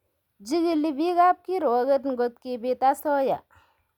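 No technical faults can be heard in this recording of speech.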